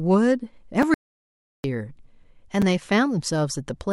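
At 0.82 s a 5.8 ms block of digital silence appears, which fits a 256-sample buffer left unfilled. It cuts hard to silence and back, giving a tick. From 0.94 to 1.64 s an audio dropout to silence leaves a 700 ms silent hole with no room tone, likely from lost input, and that stretch of speech is gone. At 2.62 s the same 5.8 ms block of digital silence produces another tick.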